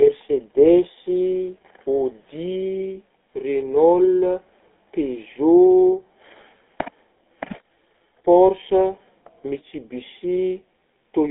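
The speech has passed through a GSM full-rate codec, a vocal-tract model driven by sparse regular pulses at a rate that fits 13 kbps, so from start to end it sounds plainly buzzy and gravelly, squeezed into a narrow 200 Hz to 3.5 kHz band.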